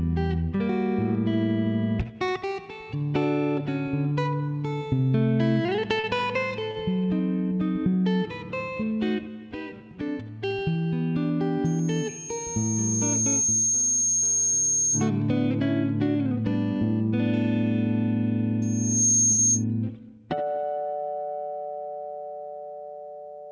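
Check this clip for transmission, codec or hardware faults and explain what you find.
Three kinds of fault are present: one short concealed packet loss, two short stalls from late packets, and two bursts of loudspeaker feedback squeal. All of this sits inside a band that stops at 8 kHz, as the call codec (which points to G.722) allows.

Short concealed packet loss, 6.00 to 6.06 s: about 40 ms of audio never arrived in time, and the receiver covered roughly 33 ms of it by extending the preceding sound from its pitch or as shaped noise, then crossfading back. It is heard as a brief smear or wobble where a fleeting sound may drop out. On a spectrogram the harmonics run on unnaturally flat, or a noisy patch appears, before normal texture resumes.

Short stall from a late packet, 6.71 to 6.79 s and 19.32 to 19.41 s: each time the jitter buffer emptied, so the last sound was stretched, by 46 ms and then 65 ms, until the packet turned up. 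Nothing is lost, and playback simply lags by that amount afterwards. The ear catches a sound held slightly too long, with a faint buzz or dip. In the waveform a repeated, evenly periodic stretch shows, and on a spectrogram a horizontally smeared frame.

Loudspeaker feedback squeal, 11.65 to 15.10 s and 18.62 to 19.65 s: the microphone hears its own loudspeaker, and at 6.5 kHz the loop gain exceeds one. That tone feeds on itself, growing over about two seconds in the first burst and in under half a second in the second, to about 5 dB above the programme. A spectrogram shows a single bright horizontal line at 6.5 kHz that thickens as it rises. The waveform gains a dense high-frequency fuzz swelling in amplitude.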